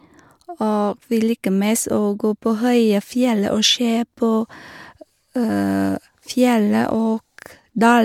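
No technical faults are audible anywhere in the speech.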